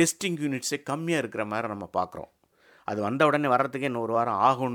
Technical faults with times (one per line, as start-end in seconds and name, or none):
3.19-4.15 drift correction step